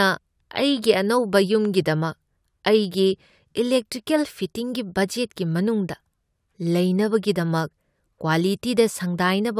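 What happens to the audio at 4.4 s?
Nothing goes wrong at 4.4 s; the speech there runs on intact, with no dropout, click, distortion or other fault at that point.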